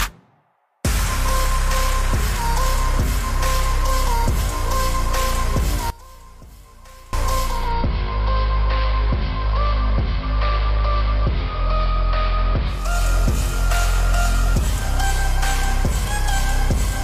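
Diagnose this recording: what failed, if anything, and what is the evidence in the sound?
One channel inverted, 5.90 to 7.13 s: the sound drops by about 22 dB and turns faint, with the centred content nearly gone. That collapse is what happens when one stereo leg has flipped polarity and the pair is summed to mono. Everything common to both channels cancels, and only their difference survives. The likely cause is a wiring or patch fault in the analogue path, such as swapped conductors on one balanced leg.

Digital radio blending to analogue, 7.35 to 13.04 s: the receiver lost its digital stream and cross-faded to the AM broadcast of the same station, offset from it by about 383 ms, then returned at the end. Hiss sits roughly 30 dB below the programme, and the level shifts by only about 1 dB. The fault is at the reception stage, before any recording or storage.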